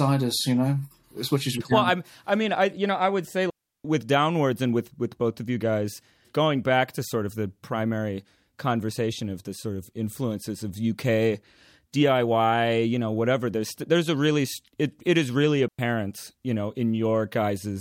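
At 3.50 s the speech drops into a digital wireless dropout lasting about 0.35 s, and a second, shorter one follows at 15.68 s, about 0.11 s long. Each time the receiver lost too much of the radio data stream and muted its output with a very quick fade, so the sound simply vanishes into near silence, with no crackle or noise burst on either side. On a waveform these appear as flat gaps with abrupt edges. A spectrogram shows clean vertical blank bands across all frequencies.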